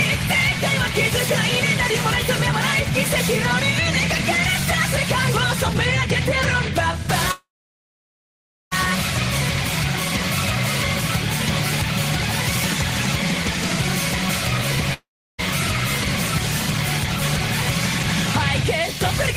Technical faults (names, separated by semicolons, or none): call audio freeze; long network dropout